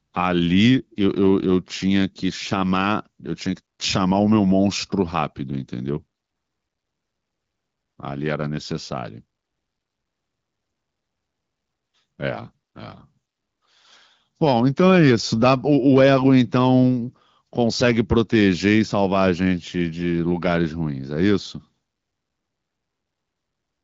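Nothing goes wrong anywhere in this speech clip, which comes across the way you'd expect from an AMR wideband (HD Voice) call at 12.65 kbit/s, carrying only the light coding trace that rate normally leaves.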